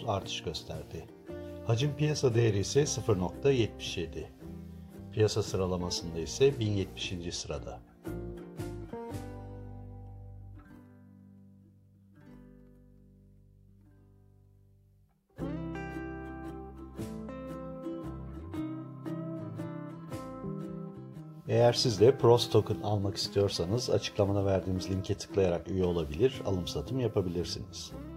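From 6.46 s to 7.69 s there is a Bluetooth SBC bit pool drop. The treble suddenly dulls. A gritty, grainy noise rises under the sound. Then the detail returns. The link seems to have been congested, so the sender cut the bit budget to keep the stream alive. The highest sub-bands lost their bits. The rest were quantised coarsely. The damage fits a bit pool falling from about 31 to 15, near 105 kbps.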